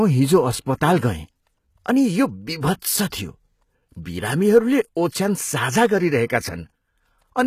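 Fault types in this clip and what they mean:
HE-AAC compression: Throughout the speech the treble sounds synthetic, with s sounds turning gritty and metallic, and the damage is plainly audible. The likely cause is HE-AAC v2 at a very low bitrate of about 20 kbps, which codes only the lower spectrum and rebuilds the top by copying lower bands upward under a coarse envelope. On a spectrogram the upper band looks like a smeared repeat of the region below it, with nothing above 14.9 kHz.
pre-echo: At 2.80 s a hiss leads a sharp attack by about 24 ms, blurring its onset. The codec spread its quantisation noise across the whole transform block, so noise sized for the loud attack also filled the quiet moment just before it. On the waveform a thin, noisy smear sits ahead of the transient's steep rise. On a spectrogram a broadband haze appears just before the sharp vertical onset.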